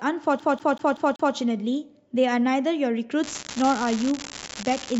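From 0.40 to 1.35 s the playback is a CD stuck on one turn: a scratch keeps throwing the laser back one track at the same point in each rotation, so the player rereads the same stretch of disc. A slice of speech about 0.19 s long plays five times in a row, each pass ending in a brief mute at the jump. The result is a quick, evenly spaced stutter that holds the speech in place before it moves on.

From 3.21 s to the end at 5.00 s there is an unreliable data bit. One line in the digital path has become marginal, and its bit comes out wrong in a random share of samples. Each wrong bit adds a spike of the same fixed size, so the errors are heard as a constant crackle or fizz over the speech. The crackle carries on into the gaps between phrases as well.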